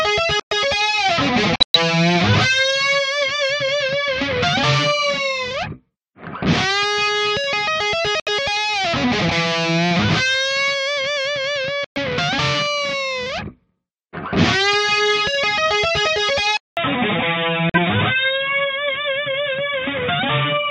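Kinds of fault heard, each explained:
Corrupt frame muted: Damaged compressed frames got rejected by the decoder and replaced with silence, so the sound drops into abrupt holes at 0.40, 1.56, 8.20, 11.84 and 17.69 s. Each hole lasts roughly 0.09 to 0.2 s, and the timing carries on unshifted afterwards.
Input switched to a poorer device: At 16.57 s there's a 200 ms gap, then the sound carries on with nothing above 3.8 kHz and a new noise floor about 30 dB below the signal, at roughly the same level. That points to a likely change of input mid-recording to a narrower-band device.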